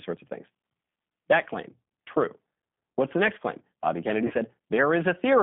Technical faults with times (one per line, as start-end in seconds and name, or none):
0.00-5.42 G.729 codec
4.27-4.34 VoIP packet loss concealed by the speech codec